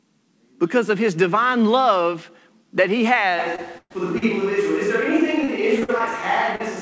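At 3.40 s, just after "divine love that he", the pickup most likely switches to a distant microphone, with the close microphone's signal lost. The new microphone sits farther from the talker, so the speech turns hollow and roomy and its low end thins. The loudness barely shifts, but room noise rises to roughly 25 dB below the speech. The change is abrupt and lasts to the end of the clip.

Short concealed packet loss follows from 3.56 to 3.60 s. About 20 ms of audio never reached the decoder in time, and the receiver bridged the hole by extending the preceding sound before blending back in. This is heard as a quick smear or wobble. The same fault returns from 4.18 to 4.24 s and from 6.56 to 6.62 s, where 40 ms goes missing each time, so the blur is longer and a brief consonant can vanish.

A burst of packet loss runs from 3.78 to 3.92 s. About 120 ms of consecutive audio failed to arrive. 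The receiver stretched the last sound and faded it down, giving a held buzz or fading hiss, with about 40 ms of outright silence. The audio then picks up later, and the stretch in between is simply gone.

From 5.44 to 6.02 s, repeated packet loss breaks the sound into a choppy, robotic texture. Four separate gaps, the longest 49 ms and together about 120 ms, are each patched by continuing the prior sound. That is about a fifth of the span. The patches come close enough together that the result sounds choppy, with fragments missing.

Throughout, the band stops at 8 kHz, which fits a wideband call codec such as G.722.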